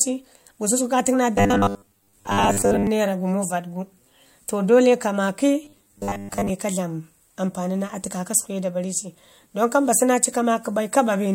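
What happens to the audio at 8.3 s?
At 8.3 s the speech continues cleanly, with no dropout, click, distortion or other fault.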